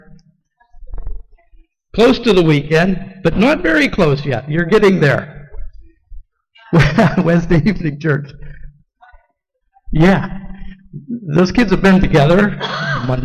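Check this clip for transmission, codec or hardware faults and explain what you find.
Nothing stood out on listening to this clip.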